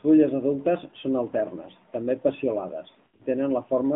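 From start to finish the speech sounds boxed in and plainly buzzy, with a thin, synthetic edge. It is cut off below about 150 Hz and above 3.4 kHz. This is the AMR narrowband mobile codec at work. It models the vocal tract and excites it with a few pulses per subframe instead of sending the waveform itself, and the damage heard here fits a mid-rate mode around 10 kbps. Nothing above the narrowband telephone limit survives.

Between 3.04 and 3.23 s, just after "són alternes també peciolades", the sound stutters and smears. It stretches briefly, sags toward silence, then returns rough and weak. These are lost AMR speech frames: about 120 ms of audio is missing, scattered over 160 ms, with the longest unbroken gap about 60 ms. For each missing stretch the decoder repeats the last good pitch and vocal-tract settings at falling gain, so the gaps are patched with fading imitation rather than left silent.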